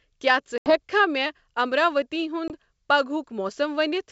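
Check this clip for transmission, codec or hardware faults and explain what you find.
Packet loss on an ADPCM call shows up twice, in a clip carried over G.722 wideband coding with faint hiss at most. The first gap runs from 0.58 to 0.80 s, about 80 ms of lost audio, several packets' worth. The second, from 2.48 to 2.51 s, is a single 20 ms hole right after "مے امراوتی". Both are hard-edged silences. After each one the decoder's predictor and step size no longer match the sender's, so the speech comes back slightly distorted before settling within tens of milliseconds. That recovery is what separates it from a plain dropout, where the speech would resume cleanly.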